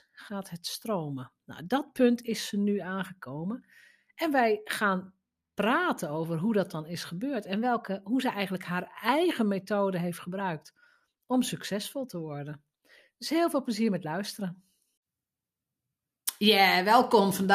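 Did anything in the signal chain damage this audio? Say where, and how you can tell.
Yes. From 7.55 to 8.26 s, after "dat dan is gebeurd", the speech jumps about 5.3% faster and roughly 90 cents sharp, then snaps back. This is likely a drift correction step at the buffer stage, unlike wow's gradual pitch wander.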